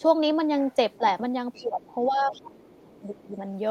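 An echo canceller that likely failed to fully remove loudspeaker pickup lets the other side's voice leak through as faint scraps at 0.92 to 0.98 s, 1.53 to 1.66 s and 1.83 to 1.94 s, some 25 to 30 dB under the talker, then stronger, about 20 dB under, at 2.31 to 2.41 s. Each time both sides talk at once, the canceller likely mistakes the talker for echo and pulls the speech down. The result is speech suppressed in double talk: a brief dip of about 10 dB at 0.98 to 1.02 s, a drop of about 20 dB from 1.59 to 1.81 s, and a long stretch from 2.08 to 3.36 s where the voice keeps sinking by up to about 20 dB for around a second in total.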